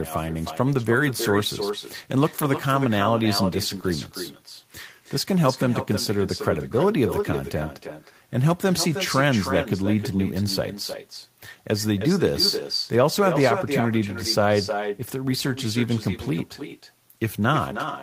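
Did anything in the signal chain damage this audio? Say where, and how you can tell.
Yes. At the call-processing stage, the far end's loudspeaker output reaches its microphone and no canceller removes it, so this speech has echo with no canceller throughout: each phrase returns roughly 300 ms later, about 8 dB quieter and thinner.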